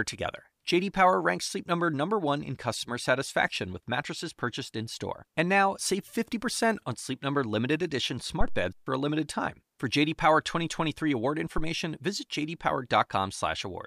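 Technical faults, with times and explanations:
8.41 to 8.74 s, phantom power thump: right after "limited edition" and before "for a limited time", a deep low-frequency thump lands, peaking at about -12 dBFS and dying away in roughly 74 ms. A supply voltage switching on a live input sends a DC step through the coupling capacitors, which the system hears as a single bass pulse. Unlike a handling bump or plosive, it has no rustle or breath onset, just one abrupt low-frequency thump and decay.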